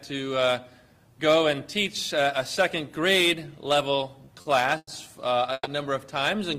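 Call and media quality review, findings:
Short stall from a late packet, 4.25–4.29 s: sound held about 20 ms too long, faint buzz or dip. Jitter buffer ran dry, receiver stretched last frame, resumed same point, nothing lost. Spectrogram: brief smeared horizontal band, no hard edge.

Short stall from a late packet, 4.41–4.47 s: 40 ms hold, slight buzz or dip. Same mechanism, playout delay grows 40 ms. Waveform: repeated-cycle stretch, small amplitude sag, then normal onset.

Call audio freeze, 4.77–4.89 s: sound stretches into fading buzz or hiss, then about 40 ms silence, resumes where it stopped. Total 100 ms inserted, nothing missing. Likely jitter buffer underrun from held-up packets. Spectrogram: decaying band into blank gap.

Call audio freeze, 5.53–5.67 s: 120 ms gap, buzz or hiss tail then about 30 ms silence. Delay grows 120 ms. Waveform: tapering envelope, flat line, abrupt restart.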